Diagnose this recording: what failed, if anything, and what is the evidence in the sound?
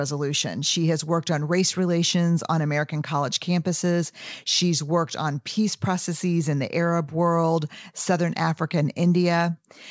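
Nothing here has failed; the speech simply came over an ordinary call path, and the way the top end stops at 8 kHz fits a wideband codec such as G.722 doing its normal job.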